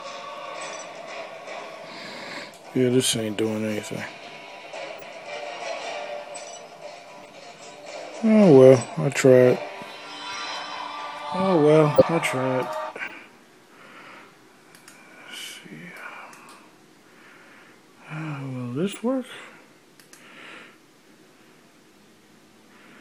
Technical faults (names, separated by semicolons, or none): corrupt frame decoded